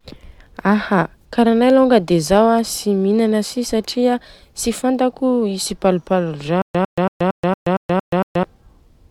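Speech clip with stutter with silent gaps from 6.62 to 8.43 s: a 101 ms fragment repeats eight times, each followed by 128 ms of digital silence, likely a stalled stream retrying. Unlike simple dropouts, the identical fragment keeps returning every 230 ms.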